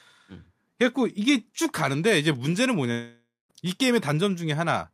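From 2.91 s to 3.51 s the speech gives way to a fading buzz, then 180 ms of near silence, before resuming with 580 ms missing, likely a long network dropout. The spectrogram shows smeared, decaying bands, then a blank gap. The waveform tapers to flat.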